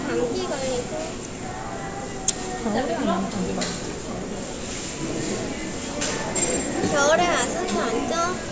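No technical faults can be heard anywhere in the recording, and the signal stays intact throughout.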